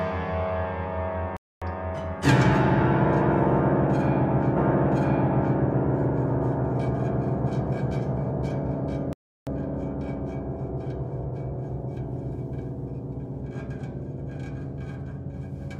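A recording of sounds, it cuts out mid-flow from 1.37 to 1.62 s (250 ms) and from 9.13 to 9.47 s (340 ms) before carrying on, a playback stall most likely caused by the player running out of data or its thread being blocked. At 4.53 s a blip marks a jump back, and about 1.02 s of audio plays again until 5.55 s, a stream segment repeated because the player fetched or queued the same segment twice.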